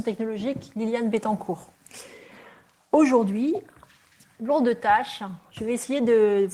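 Nothing stood out as a technical problem on listening.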